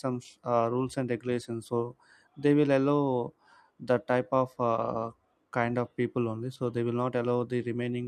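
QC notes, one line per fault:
Throughout: clock drift between sender and receiver. The sending end's clock runs about 3% slower than the receiving end's, so the receive buffer keeps running low and the receiver has to keep repeating short pieces to stay in step. Random network jitter would push the timing both early and late. Here the mismatch always goes the same way for the whole clip, so the timing keeps drifting in one direction.
0.55 to 7.94 s: repeated timing corrections. To keep pace with the slow sender, the receiver keeps repeating short slivers of audio, so the speech plays at about 97% speed and the stretch gains roughly a fifth of a second overall. These are small edits, heard at most as slight hiccups or a faintly unsteady, dragging tempo, with the repeats unevenly spaced. Packet loss would leave gaps. These edits instead add material, and every one lengthens the sound.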